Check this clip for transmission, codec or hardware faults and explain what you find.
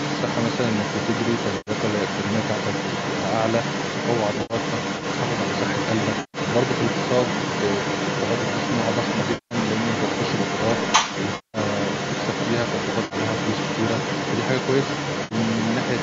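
Two faults can be heard in this speech: an echo leak throughout, and seven patches of AAC frame loss with concealment.

Echo leak, 0 to 16 s: a second copy of the speech trails the original by about a quarter of a second (246 ms) and is roughly as loud as the speech itself. This is likely a far-end loudspeaker whose sound reached its microphone and was not fully removed by the echo canceller before being sent back into the call.

AAC frame loss with concealment occurs at these points:
1.57 to 1.71 s (100 ms lost)
4.34 to 4.54 s (110 ms lost, scattered over 160 ms, the longest gap around 70 ms)
6.20 to 6.38 s (140 ms)
9.34 to 9.55 s (170 ms)
11.35 to 11.58 s (190 ms)
13.05 to 13.15 s (60 ms)
15.24 to 15.35 s (70 ms)

Each patch sounds smeared, hollow or phasey rather than silent. The decoder never received these stretches. It rebuilt them from the last good spectrum, so the concealed audio holds a smeared, noisy fill in place of the real speech.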